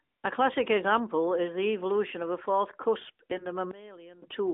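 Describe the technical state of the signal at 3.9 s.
At 3.9 s the speech sits inside a sudden gain jump lasting from 3.71 to 4.22 s. The level drops by about 18 dB in a single step, with speech and background noise falling together. A gain change applied without a ramp is the likely cause.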